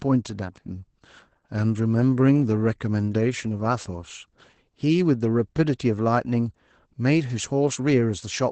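Speech throughout sounds muffled, slightly hoarse and faintly robotic, with nothing above 8.8 kHz. That is Opus voice compression in its SILK mode: wideband limiting and coarse excitation coding, with plainly audible damage that fits a bitrate around 12 kbps.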